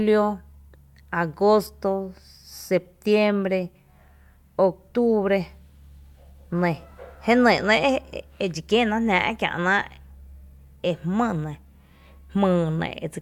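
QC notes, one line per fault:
No technical faults were found in the signal at any point in this speech recording.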